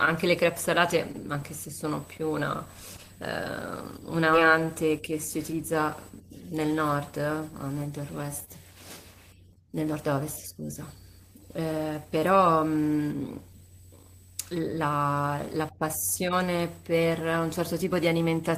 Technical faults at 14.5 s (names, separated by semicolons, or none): none